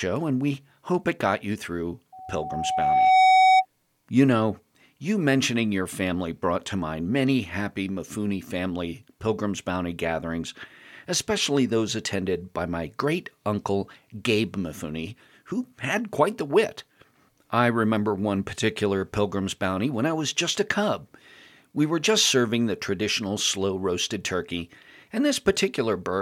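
From 2.12 s to 3.66 s the speech is overtaken by loudspeaker feedback squeal. A single tone near 753 Hz swells over about a second until it sits roughly 10 dB above the speech, then stops. The microphone is picking up the loudspeaker it feeds, and at that one frequency the loop gain has exceeded unity, so each pass through the system reinforces the tone until the loop is broken.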